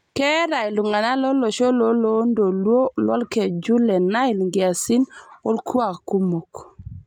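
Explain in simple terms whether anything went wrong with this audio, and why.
Nothing went wrong with this recording of speech: there is no technical problem to hear at any point.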